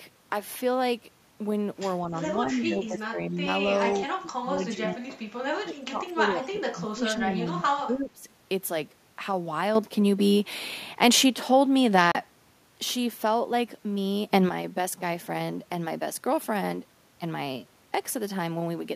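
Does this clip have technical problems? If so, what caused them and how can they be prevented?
Yes. The speech dips in level at 2.04–2.21, 2.38–3.48, 3.65–3.92, 4.08–5.03 and 5.62–8.28 s. The shortest dips are about 5 dB and the deepest about 20 dB. This is likely speech suppressed in double talk: an echo canceller mistook overlapping far-end sound for echo and attenuated both. A canceller with better double-talk detection would prevent it.

From 3.73 to 3.97 s there is a faint delayed copy of the speech, about 30 dB down and trailing by 238 ms. This is likely an echo leak, where a loudspeaker's output reached a microphone and the canceller did not fully remove it before sending it back. Headphones on the far end, or a better-converged canceller, would prevent it.

At 9.75 s the level steps up about 8 dB, with the background noise rising alongside it, and stays up until 12.54 s. At 14.30 s it jumps about 10 dB for 0.19 s. 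These are likely sudden gain jumps, where digital gain was applied instantly rather than ramped. Smoothing gain changes over a few milliseconds would prevent them.

At 12.12 s the sound drops out for 30.5 ms and then resumes further along, which fits two lost packets. This is likely a Bluetooth dropout, with packets arriving too late to play. A stronger link, less radio interference or a larger playback buffer would prevent it.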